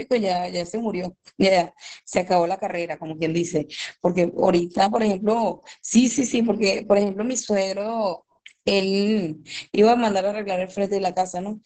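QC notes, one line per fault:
Throughout: Opus voice compression. The speech is cut off above about 8 kHz and sounds muffled, hoarse and slightly robotic. This is the SILK coder's linear-prediction model carrying the voice with a coarsely coded excitation, and the heavy damage fits a bitrate near 10 kbps. A plain low-pass filter would be dull but clean. Here the grainy, buzzy texture in the voice itself marks a speech codec starved of bits.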